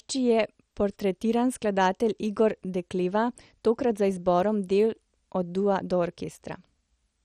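A speech recording with heavy MP2 compression damage from start to finish. The upper bands flicker in and out, nothing is left above 15.2 kHz, and the remaining content has a gurgling, granular roughness with a dull overall tone. The likely cause is MPEG Layer II coding starved of bits, consistent with a rate around 56 kbps. Unlike a plain low-pass filter, the grit and the switching bands set it apart.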